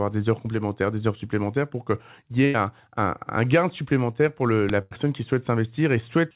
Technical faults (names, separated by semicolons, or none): burst of packet loss; uninitialised buffer